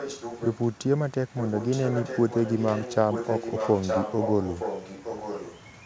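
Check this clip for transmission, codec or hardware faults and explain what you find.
There's one fault here, an echo leak. From 0 to 0.78 s and from 1.27 s to the end, the speech returns about 0.92 s late, quiet at first, then only slightly below the original. The likely cause is a far-end speakerphone whose echo canceller let its mic pickup through.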